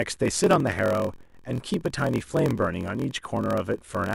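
Speech with a block size mismatch (padded) throughout: a steady 43.1 Hz buzz fits zero-filled gaps in each 1024-sample block, slowing delivery to 0.938× while timbre stays, unlike a sample-rate error.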